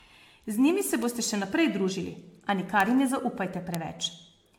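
Throughout, the speech sounds swirly and hollow, with smeared attacks and nothing above 19.4 kHz, likely generation loss from roughly seven passes through an AAC-LC codec.

Bit error spikes occur at 1.03 s, between "njimi se" and "boste še naprej družili"; at 2.80 s, just before "jim ne"; and at 3.75 s. Each is a sharp broadband tick from a flipped bit in one or two samples.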